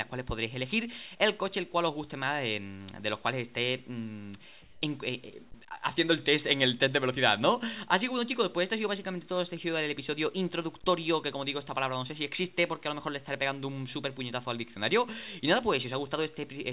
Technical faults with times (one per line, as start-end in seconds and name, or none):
4.62-4.82 comfort noise in place of the background